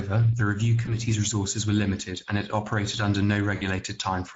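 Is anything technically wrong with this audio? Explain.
Yes. The speech carries constant codec damage and two short concealed dropouts.

Throughout, the Speex codec is plainly audible. This CELP coder has too few bits for the excitation, so the speech sounds hoarse and noisy. The band above 4 kHz is only shaped noise fill. The damage points to a mid-rate setting of about 17 kbps.

From 0.85 to 0.94 s, after "the review" and before "resources were limited and", there is VoIP packet loss concealed by the speech codec. The decoder extrapolated its last pitch and filter with falling gain. This produces a brief stretched, fading sound, which fits one lost 20 ms frame. The same fault returns from 3.55 to 3.64 s, after "and it operated under". There the fading, stretched sound is longer and points to about 60 ms lost. Because each frame builds on the last, the speech stays weak or distorted briefly after both gaps.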